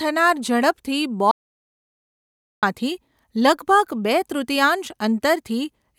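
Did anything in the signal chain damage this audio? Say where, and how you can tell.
Yes. The input link to the recorder likely failed, and the recorder kept writing silence: an audio dropout to silence from 1.31 to 2.63 s. The speech cuts off mid-flow into total silence with no room tone, and about 1.3 s is lost.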